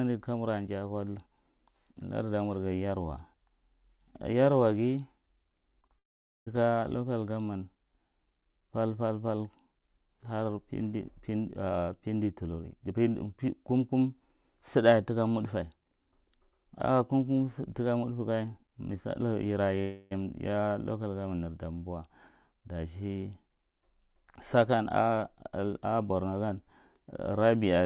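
Speech heard over a narrowband call line, with nothing above 4 kHz, which fits G.711 mu-law coding. Two short concealed packet losses fall at 5.82 s and 5.87 s. Each gap of about 20 ms was patched from the preceding sound, leaving brief smears. A long network dropout is the likely cause at 5.99 to 6.48 s. The sound drops out for about half a second, mostly silent, then returns at "local damman" with that stretch missing. Another stretch at 19.81 to 20.13 s is probably the same kind of dropout. Here about 0.3 s is replaced entirely by a fading synthetic continuation instead of the real audio.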